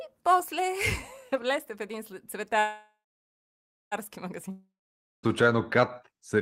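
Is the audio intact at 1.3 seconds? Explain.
Yes, the speech at 1.3 seconds plays through cleanly with no dropout, click, distortion or other fault at that moment.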